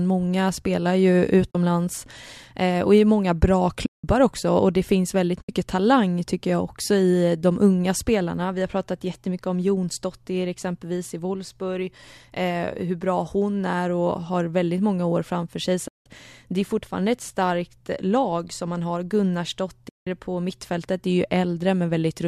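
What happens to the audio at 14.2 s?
At 14.2 s the speech continues intact, with no dropout, glitch or other fault, just the light texture of the low-delay AAC compression, likely AAC-ELD, that runs through the clip.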